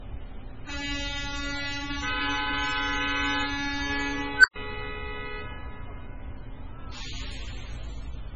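From start to finish the sound is smeared and watery, with a dull, narrow top end and swirling artefacts around transients, yet the file carries none of that in its size. This is low-bitrate audio saved at a high bitrate, most likely a very low-rate MP3 re-encoded at a generous rate. Unlike ordinary low-bitrate encoding, the damage cannot be cured by the later encode, which only preserves it faithfully.

At 4.36 s an unstable filter takes over: a tone around 1.5 kHz swells from nothing to clipping in about 83 ms. The recursion in the filter feeds its own output back with too much gain, so the level runs away until the arithmetic overflows. The sound then drops out for about 118 ms before the filter resets near 4.56 s. Unlike feedback howl or a dropout alone, it pairs an explosive beep with an abrupt silence.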